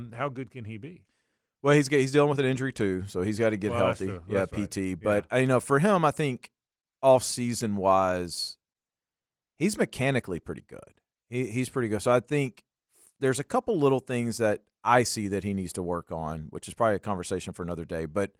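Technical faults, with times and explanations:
No technical faults can be heard in this speech.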